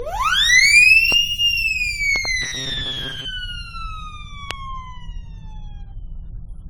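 The whole music clip has a swirly, smeared, hollow quality, more than a single lossy encode would give, with attacks blurred. That's generation loss, most likely from the audio being put through AAC-LC something like seven times, sounding like a chain at around 64 kbit/s. Each pass quantises again on a shifted frame grid, so the noise and spectral holes build up rather than staying put.

At 1.12 to 1.14 s there's a loud pop, a sharp crack about 15 dB above the music, which carries on underneath. A sudden voltage step, from a plug, a switch or static, is the likely cause, shaped by the downstream circuitry into a short click. From 2.16 to 2.27 s comes a double pop, two hits in quick succession at about 10 dB over the music.

Right after, from 2.42 to 3.26 s, the music goes rigid and metallic, with a buzz at 134 Hz. That's the robotic sound from repeated short buffers: audio likely arrived too seldom, so the last short chunk was looped to fill the gap and roughly half the real audio got skipped. 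A 134 Hz buzz fits a buffer of about 7.5 ms being repeated.

Last, at 4.51 to 4.53 s, the loudest pop lands, about 20 dB above the music, again a sharp single hit with the sound continuing underneath.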